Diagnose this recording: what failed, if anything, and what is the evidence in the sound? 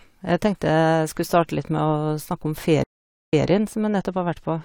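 A stream reconnect at the network stage: from 2.84 to 3.46 s the speech stops for about 0.45 s, then resumes 0.17 s earlier. That repeat distinguishes it from a simple dropout.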